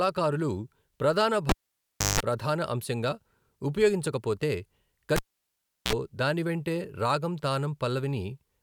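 At 1.49 s a pop cuts the speech to near silence for about 0.66 s, then a 50 Hz buzz of about 0.17 s and a second pop precede "ప్రధాన అంశంగా ఉపయోగించకపోతే". At 5.16 s the same happens: a 0.72 s gap and a 47 ms 60 Hz buzz before "దాని వెంటే రాగం". Both are a cable pulled and plugged in. The live plug leaves the jack, and as it goes back in, the tip alone touches first and picks up mains hum.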